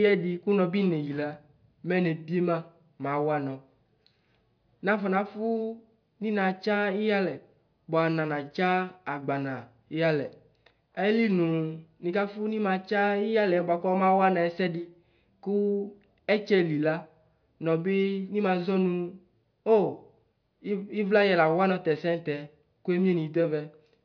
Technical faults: none

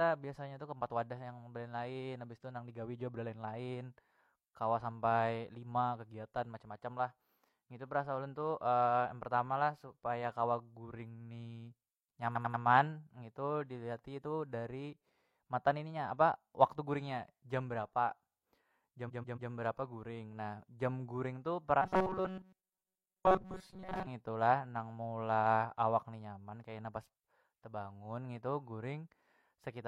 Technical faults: repeated frames; robotic sound from repeated short buffers

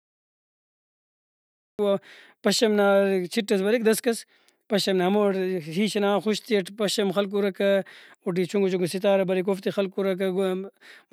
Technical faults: cut-off start

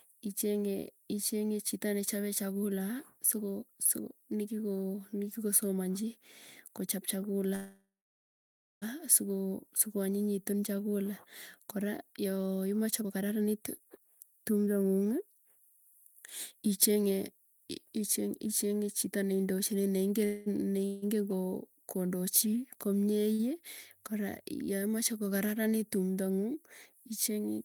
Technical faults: call audio freeze; jitter buffer speed-up; short stall from a late packet

